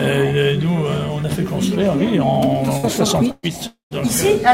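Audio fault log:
2.77–2.86 s and 3.31–3.46 s, burst of packet loss: about 60 ms and then 120 ms of audio never arrived. The receiver extended the last sound and faded it, so each gap is a brief held buzz or hiss before the audio jumps ahead. On a spectrogram this appears as smeared, repeated frequency bands thinning out, and the second gap ends in about 10 ms of flat silence.
3.67–3.94 s, long network dropout: a fading buzz or hiss lasts about 0.24 s, its last 130 ms or so dead silent, and the sound resumes without the stretch in between, likely from the network briefly cutting out. The waveform shows a decaying envelope that flattens to silence, and the spectrogram a blurred band dissolving into a blank gap.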